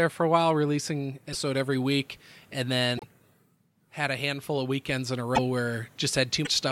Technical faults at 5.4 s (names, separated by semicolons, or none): broken MP3 bit reservoir